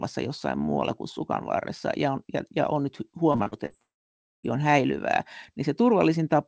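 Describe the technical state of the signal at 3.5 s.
Repeated packet loss (robotic sound) runs from 3.32 to 3.72 s. Five short dropouts, the longest 39 ms, are each patched by extending the preceding sound, so about 39% of the stretch is concealed and the speech turns choppy.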